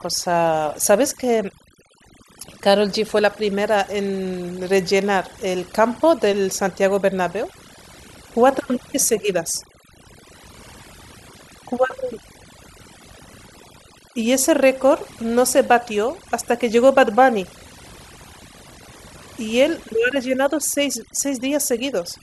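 Overdone noise removal runs throughout this speech clip: an overly aggressive reducer cuts bands near its noise estimate, leaving twinkling near-silence between phrases and quiet parts of the voice cut away.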